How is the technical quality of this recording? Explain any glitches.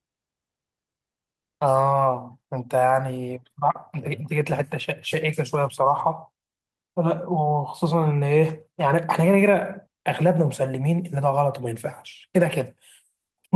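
The technical quality holds up, with no glitches to explain anywhere in the recording.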